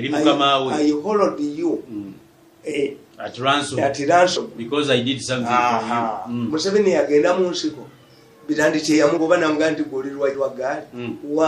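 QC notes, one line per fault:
Throughout, MP3 compression: faint detail flickers in and out, giving a plainly audible watery, swirling texture. This is likely from an encoder running short of bits, which fits a bitrate around 64 kbps.
2.71, 4.35, 6.49, 9.16 and 10.33 s, compressed frames skipped: the audio jumps forward by whole 26.1 ms frames, losing roughly 70, 50, 150, 50 and 100 ms. Overlapping frames blend across each gap, so every jump is a short smeared blip.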